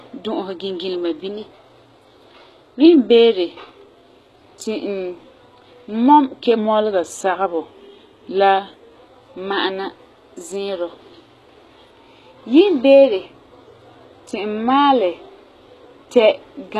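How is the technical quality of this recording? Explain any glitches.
The recording has plainly audible codec damage throughout and three stretches where speed and pitch jump.

HE-AAC compression, likely at a low bitrate around 16 kbps, codes only the lower spectrum and rebuilds the treble by copying lower bands upward. That synthetic top ends at 12.4 kHz, and its harmonics don't align with the real ones below, so s sounds come out gritty and metallic.

A drift correction step is the likely cause of three sudden shifts, where clock-matching software changed the playback rate in one jump. From 1.29 to 2.86 s and from 12.61 to 13.26 s the speech runs 6.35% fast and about 107 cents sharp. From 6.58 to 9.01 s it runs 6.35% slow and about 114 cents flat. Each shift is roughly a semitone, and each snaps back afterwards.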